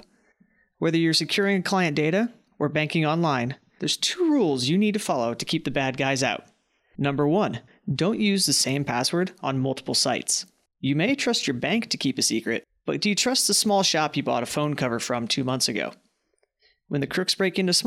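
A speech recording with nothing technically wrong with it.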